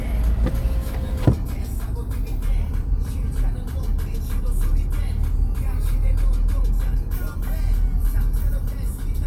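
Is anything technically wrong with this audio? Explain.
No, nothing technically wrong can be heard anywhere in this audio.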